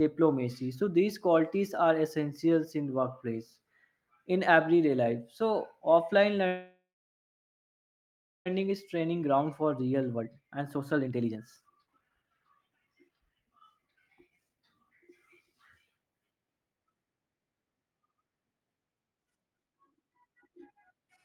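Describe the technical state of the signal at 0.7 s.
At 0.7 s the speech signal is intact, with no audible technical fault at that moment.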